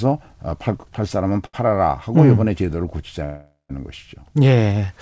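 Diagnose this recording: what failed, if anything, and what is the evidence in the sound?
A short stall from a late packet hits at 1.46 to 1.69 s. It is a network and jitter-buffer fault. A packet arrived late and the buffer ran dry. The receiver held the last sound for about 74 ms, then resumed where it left off. Nothing is lost.

A call audio freeze runs from 3.24 to 3.72 s. The last sound stretches into a fading buzz and then about 150 ms of silence. Roughly 450 ms of time is inserted, with nothing missing. The likely cause is packets held up on the network, emptying the jitter buffer. The band stops at 8 kHz throughout, which fits a G.722 wideband call path.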